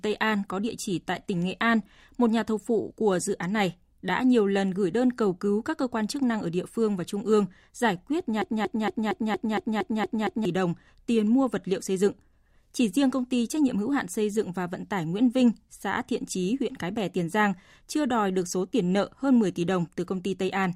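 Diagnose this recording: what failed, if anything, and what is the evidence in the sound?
A broken-record loop runs from 8.42 to 10.45 s, straight after "trung ương giải quyết": a fragment of about 0.23 s repeats nine times back to back, identical each pass, before speech resumes at "đồng tiền mua vật". The likely cause is a stalled playback or stream buffer that kept re-sending its last block. Unlike a stutter or jitter glitch, the repeats never vary or advance, and the speech that belonged in those two seconds is gone.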